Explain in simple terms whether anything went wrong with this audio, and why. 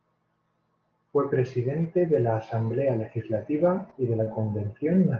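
Something did go wrong, once: a short concealed packet loss at about 4.23 to 4.28 s, just after "legislativa y de". About a fiftieth of a second of the call arrived too late to be played. The receiving end covered the gap by stretching the sound that came just before it, then blending back into the real audio. What you hear is a brief smear or wobble there, and a quick sound may go missing.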